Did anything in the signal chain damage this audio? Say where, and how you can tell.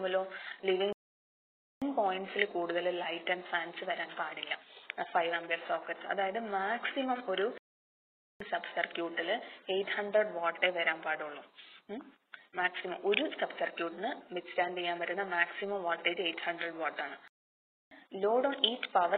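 Yes, at playback: three playback stalls, the sound cutting out from 0.93 to 1.82 s, 7.58 to 8.40 s, and 17.28 to 17.91 s, most likely the player starving for data.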